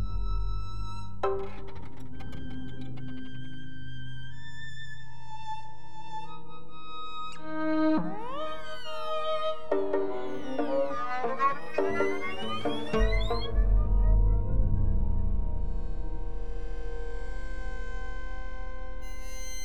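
A DC offset of about -29 dBFS runs throughout the audio, shifting the whole waveform off zero, using headroom and adding steady energy at the very bottom of the spectrum.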